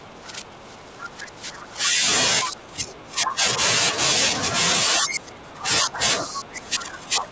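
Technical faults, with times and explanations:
0.0–2.07, 2.44–3.44, 4.99–6.01 and 6.25–7.31 s, speech suppressed in double talk: the speech sinks by about 10 dB at first, then about 20 dB, rather than cutting to silence, likely from an echo canceller turning everything down during overlap.
1.02–1.08 s, other side's voice leaking through: a brief scrap of a second, different voice sits about 15 dB under the speech, likely loudspeaker sound the echo canceller failed to remove, unlike a delayed copy of the talker.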